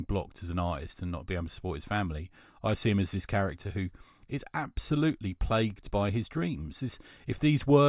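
No technical faults are audible.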